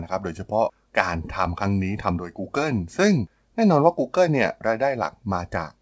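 Speech that has come over a wideband call path, consistent with G.722 at 64 kbps, with nothing above 8 kHz, and no technical faults can be heard anywhere in it.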